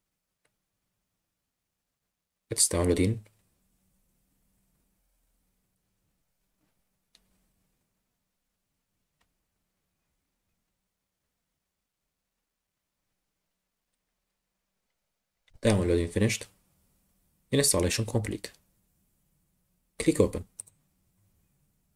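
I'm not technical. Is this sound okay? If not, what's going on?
Yes, this sound is okay, with nothing going wrong in it.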